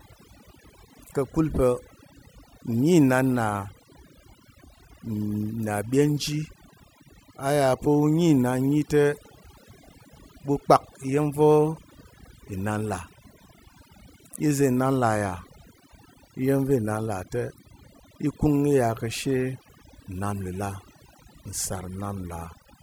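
Overdone noise removal runs throughout: bands near the noise estimate are cut away, leaving twinkling specks in near-silent gaps, unlike a steady codec swirl.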